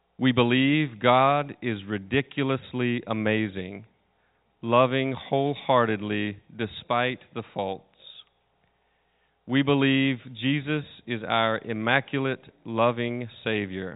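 No technical faults can be heard in the speech, which carries the narrow band, topping out at 4 kHz, of G.711 telephone coding working as intended.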